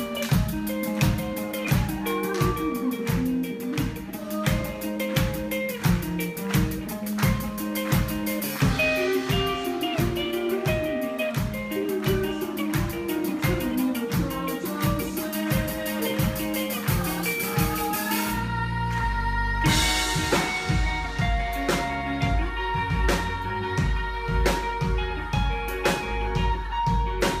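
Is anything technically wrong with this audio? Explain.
No, nothing is technically wrong with this audio.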